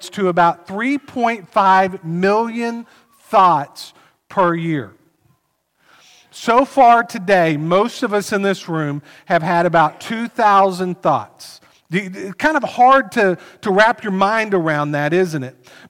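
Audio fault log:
No fault is logged for this audio.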